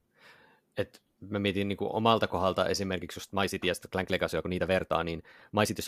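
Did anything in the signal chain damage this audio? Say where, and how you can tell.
Yes: from 2.94 s to the end the speech turns rushed at unchanged pitch, a time-stretched section sped up 1.35 times, likely software dropping short pieces.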